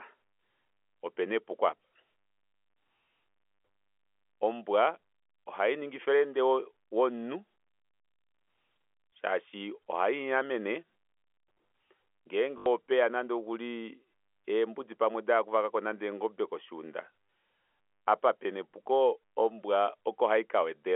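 At 4.34 s, just before "ombwa ohaningi friende womunhu", there is packet loss with the last packet repeated. About 40 ms of missing audio is filled by replaying the previous chunk. At 12.58 s an 80 ms run buzzes near 50 Hz, which fits 20 ms packets.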